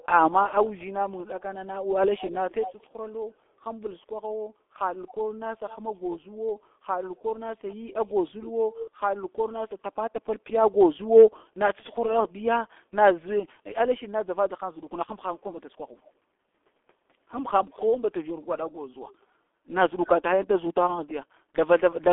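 Across the whole clip the speech carries heavy G.723.1 codec damage: the band runs only from about 250 Hz to 3.5 kHz, and the voice sounds muffled and hoarse with smeared consonants, consistent with a coder near 6 kbit/s. Plain band-limiting alone would stay clean rather than rough.

From 0.0 to 0.85 s, and again from 1.41 to 2.87 s, a faint second copy of the speech trails it by about 230 ms, quieter in the first stretch and somewhat louder in the second. This is likely an echo leak, where a loudspeaker's echo canceller let the far end's sound back into the line. Unlike room reverberation, it is a distinct, delayed repeat rather than a smooth decay.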